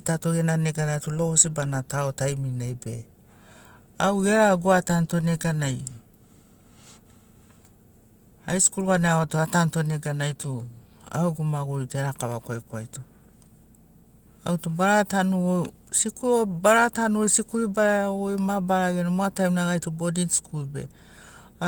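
Speech with no technical faults to report; it carries Opus voice compression at 24 kbps in hybrid mode, fullband, 20 ms frames, working as intended.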